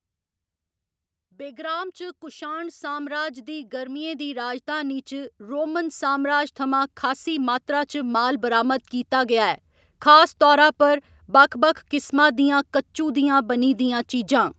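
From 1.16 s to 9.56 s, automatic gain rising sets in. The gain control judged the input too quiet and kept turning it up. Across those 8.4 s the level climbs by about 18 dB. Speech and background noise swell together, slowly and steadily.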